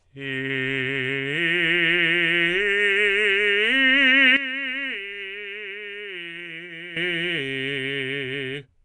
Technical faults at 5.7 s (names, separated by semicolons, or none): Nellymoser compression; sudden gain jump